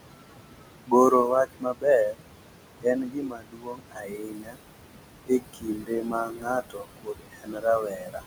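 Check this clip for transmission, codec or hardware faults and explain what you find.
Three faults are audible: a stuck bit, noise suppressor artifacts, and speech cut by the noise suppressor.

Stuck bit: throughout, distortion rides on the sound and fills pauses with noise. A data bit is likely stuck, shifting about half the samples by its weight.

Noise suppressor artifacts: throughout, the suppressor cuts what it takes for steady noise by about 21 dB. The room noise, about 9 dB below the speech, sinks between phrases and rises under them.

Speech cut by the noise suppressor: at 0.11 to 0.93 s, 1.11 to 1.86 s, 2.10 to 2.25 s, 2.81 to 4.61 s, and 5.26 s to the end. Soft parts of the speech were mistaken for noise and pulled down by up to about 22 dB. They sound swallowed, and the last two stretches lose roughly 1.5 and 2 seconds.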